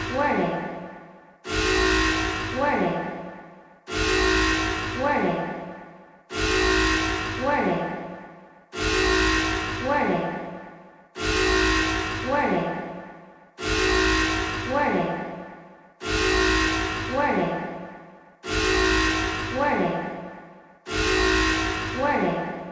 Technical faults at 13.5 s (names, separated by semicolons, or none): none